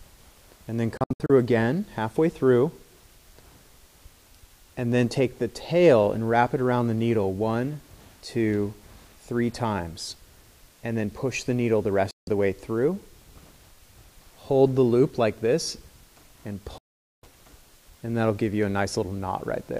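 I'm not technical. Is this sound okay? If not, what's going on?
No. The sound drops to silence in short holes at 0.97 to 1.30 s, again at 12.11 to 12.28 s, and for nearly half a second at 16.78 to 17.24 s. This is a digital broadcast dropout: the receiver briefly lost the signal, muted, then resumed, and the missing moments are gone.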